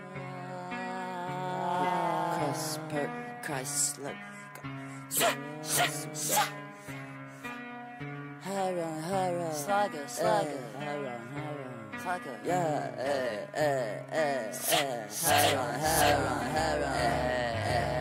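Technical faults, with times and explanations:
15.38 s to the end: doubled audio track. The same audio has most likely been mixed in a second time, either captured again through a slower path or left as two out-of-step copies after an edit. A full-band copy trails the original by roughly 0.7 s at about the same level, so every sound repeats as a clean, equally loud echo with no decay or room colour. The copy enters abruptly at 15.38 s and runs to the end of the clip.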